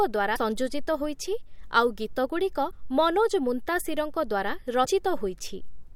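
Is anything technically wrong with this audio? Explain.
Yes. At 0.35–0.38 s, 2.70–2.73 s and 4.84–4.86 s the speech briefly jumps ahead with a short chirp, burst of noise or short hole. This is likely a broken MP3 bit reservoir: after a dropped frame, the next frame borrows data from bytes that belong elsewhere, and the frames here are 24 ms long.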